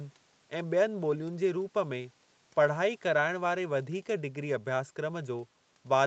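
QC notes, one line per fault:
No faults are heard in this speech. The sound stops at about 8 kHz, as expected after call processing and the Opus call codec.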